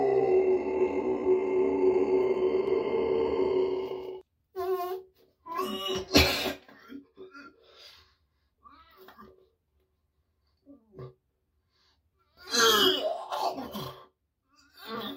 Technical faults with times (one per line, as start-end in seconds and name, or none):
2.67-4.21 doubled audio track